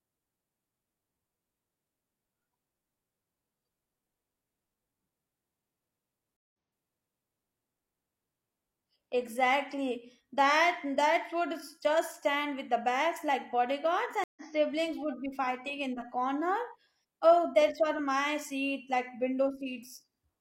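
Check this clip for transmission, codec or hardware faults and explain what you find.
Two stream reconnects break up this speech. At 6.37 s the audio drops out for 163 ms, then restarts about 0.93 s earlier, so you hear a chunk repeated. At 14.24 s, after "the bags like bodyguards", there's a 126 ms gap before "siblings would be fighting" picks up a touch later. Both times the connection broke and a fresh decoder started mid-stream, so the first frame fades back in.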